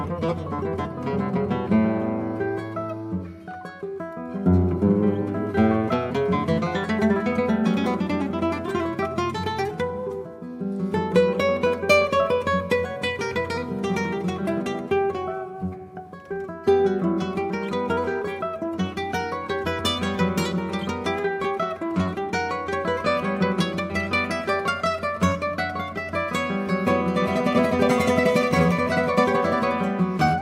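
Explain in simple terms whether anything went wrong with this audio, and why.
Nothing went wrong with this audio, as no faults can be heard anywhere in it. At no point does anything stand out as a problem that needs explaining or fixing.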